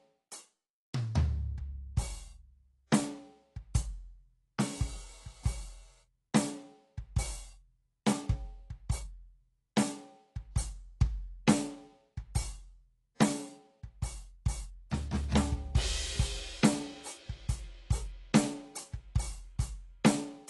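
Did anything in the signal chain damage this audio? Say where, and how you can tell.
Yes. AAC compression runs throughout this music clip at the codec stage. Nothing is present above 11.5 kHz, and the damage is plainly audible: the top end is dull, and sustained material has a smeared, warbling texture. That is likely a low-bitrate AAC-LC encode, which fits something around 32 kbps. At that rate the encoder drops its cut-off and spends its few bits on the bands the hearing model rates most important, so the rest is thinned out or left out.

Pre-echo appears from 13.15 to 13.20 s, also at the codec stage. A short hiss runs about 56 ms ahead of a sharp attack, and the attack itself sounds softened. The transform block containing that onset spread its quantisation noise evenly across its whole length. Noise sized for the loud transient therefore leaked into the quiet stretch just before it, where nothing masks it.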